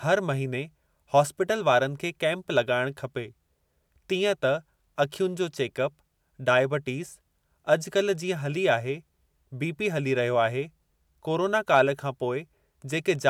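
A speech recording with nothing technically wrong to report.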